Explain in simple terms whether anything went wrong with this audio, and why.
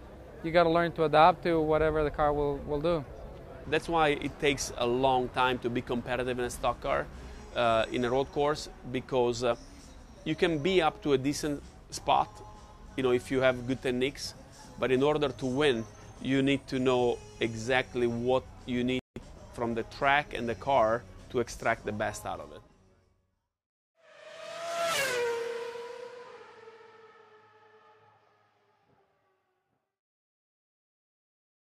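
A playback stall occurs at 18.99 s. The sound drops to silence for about 169 milliseconds, until 19.16 s, and then resumes. The player likely ran short of data or was briefly held up, so nothing reached the output during that gap.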